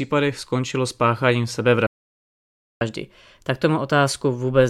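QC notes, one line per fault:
1.86–2.81 s, playback stall: the player was likely starved of data or had its output thread blocked, so nothing reached the output for about 0.94 s. The speech cuts off mid-flow into silence, then resumes once the player recovers.
2.81–4.69 s, catch-up at higher speed: after the stall the player resamples its backlog to run 1.1 times faster, clawing back some of the lost time. Because speed and pitch are tied together, the speech sounds hurried and sits about one and a half semitones sharp to the end.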